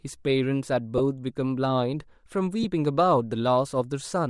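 Bluetooth LC3 compression, heard across the whole speech clip, plainly colours the sound. The upper spectrum has a breathy, grainy sheen where fine detail has been thinned out and replaced with noise. The texture likely comes from the LC3 codec running short 7.5 ms transform frames at a modest rate, in keeping with something near 48 kbps, where too few bits remain to code the high band faithfully.

Lost LE Audio frames then break the flow at 0.98 to 1.00 s and again at 2.63 to 2.65 s. Each gap lasts about 15 ms, which fits two consecutive 7.5 ms frames going missing. The decoder patches each hole by repeating the previous spectrum with scrambled phase, so instead of silence there is a brief noisy smear in place of the clean signal.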